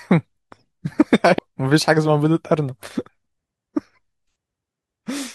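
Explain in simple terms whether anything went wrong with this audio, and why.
Compressed frames skipped, at 1.38 s and again at 3.08 s. Each time the speech jumps forward, losing roughly 0.15 s the first time and about a fifth the second. The file stores sound in short blocks that are decoded one after another. Here a run of those blocks was missing or rejected as damaged, so playback leapt ahead.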